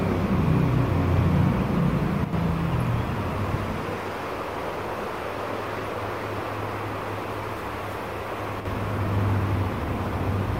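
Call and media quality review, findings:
Brief level dips of about 6 dB at 2.24–2.33 s and 8.60–8.65 s, roughly 90 ms and 50 ms long, with abrupt edges. Likely one channel drops out: one stereo channel goes silent, so the mono sum loses half its shared content, and anything present only in that channel vanishes.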